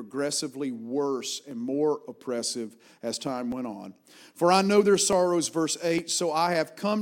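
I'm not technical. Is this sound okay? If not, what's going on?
No. You'll hear four sharp clicks: at 1.51 s, just before "more oppressive as time"; at 3.52 s, between "more oppressive as time" and "went on"; at 5.13 s, right after "I know their"; and at 5.98 s. The likely cause is dropped samples. A tiny sliver of the recording, less than a thousandth of a second, went missing each time. The sound jumps abruptly across the gap, and that jump makes the click.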